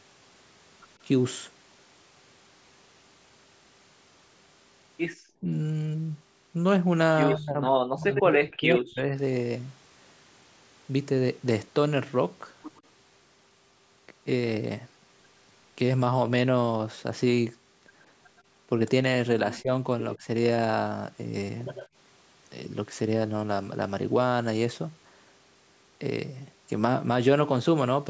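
Speech suppressed in double talk from 7.35 to 7.62 s and 7.78 to 9.12 s: the echo canceller, likely unable to separate the talker from loudspeaker echo, turns the voice down by about 25 dB and then about 40 dB. Inside that stretch, from 8.15 to 8.35 s, an echo leak lets a copy through 107 ms late at only about 5 dB below the speech. Fainter leaks follow at 12.76 to 12.82 s and 18.37 to 18.42 s, both 125 ms late and about 35 to 40 dB down. Brief suppression dips of about 10 dB occur at 19.61 to 19.7 s and 20.16 to 20.27 s. A final echo leak at 21.73 to 21.88 s arrives 98 ms late, about 15 dB under the voice.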